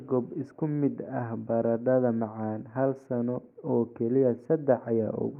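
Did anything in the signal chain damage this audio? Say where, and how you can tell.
No, nothing in the signal chain damaged this speech recording. No stage from capture to playback leaves any audible trace on it.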